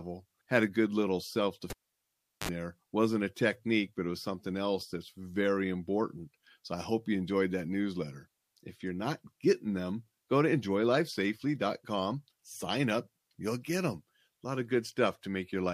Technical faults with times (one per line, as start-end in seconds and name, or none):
1.70-2.49 cable pulled and plugged in